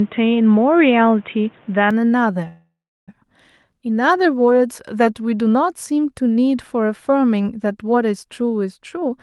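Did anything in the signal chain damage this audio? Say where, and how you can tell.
Yes. From 0.0 to 1.91 s the speech has nothing above 3.8 kHz, with different background noise roughly 35 dB down and a level step of about 5 dB. This is likely an input switched to a poorer device at the capture stage. A spectrogram shows a flat ceiling that lifts abruptly at 1.91 s, with no gap.

At the network and receive-buffer stage, a call audio freeze runs from 2.47 to 3.10 s. The last sound is stretched into a fading buzz, then about 0.34 s of silence, about 0.6 s inserted in all. The likely cause is delayed packets draining the jitter buffer. The waveform shows a decaying tail and a flat gap, then resumes with nothing lost.

From 8.80 to 9.12 s, a jitter buffer speed-up in call processing plays the speech at 134% speed with unchanged pitch. Repeated cuts of one or a few pitch periods drop about a tenth of a second in total. 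On a spectrogram the harmonics stay level while syllables look compressed in time.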